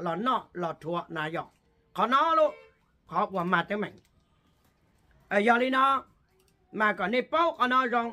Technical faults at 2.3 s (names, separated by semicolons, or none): none